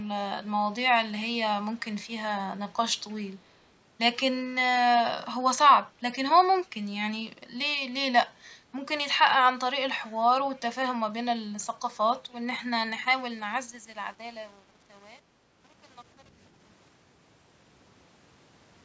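Faint, delayed ghosts of the speech surface at 1.75 to 1.82 s, 3.0 to 3.27 s and 10.56 to 10.60 s, each a brief scrap trailing the original by about 307 ms and sitting roughly 35 to 40 dB below it. This is an echo leak, likely from a far end on loudspeaker whose echo canceller let part of the microphone's pickup slip through and return down the line.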